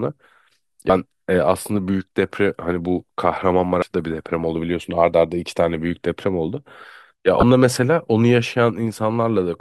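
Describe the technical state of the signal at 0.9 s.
At 0.9 s the speech is passing through damaged data in a compressed stream, spanning roughly 0.87 to 0.90 s, about 30 ms. Over that stretch the bitstream carries corrupted bytes, so the decoder misinterprets or rejects the affected frames, drops synchronisation, and scans forward for the next valid frame header before resuming. The result is a brief chirp, squawk, click or short hole in the speech at that point.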